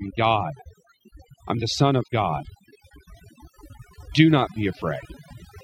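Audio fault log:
Throughout: overdone noise removal. The noise reduction was set too hard, cutting individual frequency bands near the noise level down to nothing. Quiet parts of the speech vanish with them. Pauses drop and break up into twinkling specks.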